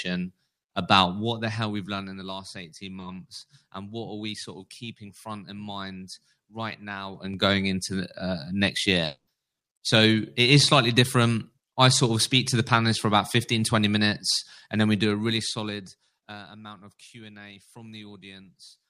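At 2.99 to 3.03 s the speech briefly smears. This is short concealed packet loss. About 20 ms of audio failed to reach the decoder in time. The receiver patched the gap by extending the preceding sound, following its pitch where voiced and using shaped noise where not. It then crossfaded back into real audio. The result is a tiny wobble or smear, and a brief consonant there may go missing.

From 9.05 to 9.29 s the speech breaks off. A fading buzz or hiss carries on for a moment, then gives way to silence for roughly a tenth of a second. The speech resumes with that part gone. Around 220 ms is lost. This is likely a long network dropout. No packets arrived for the stretch, so the receiver extended the last sound until it faded out, and the missing audio was never recovered.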